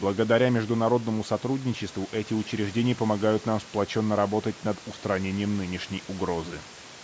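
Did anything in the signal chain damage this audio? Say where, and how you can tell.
No, nothing in the signal chain stood out as damaging this speech on listening; the top of the band ends around 8 kHz, as expected from the call's microphone processing, and the room noise sits about 23 dB below the speech.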